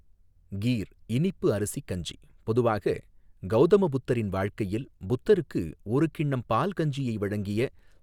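No technical faults can be heard anywhere in the recording.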